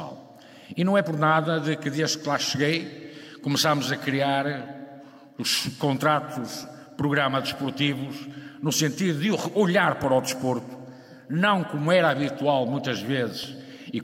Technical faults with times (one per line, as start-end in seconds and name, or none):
3.23-13.44 clock drift buffer slips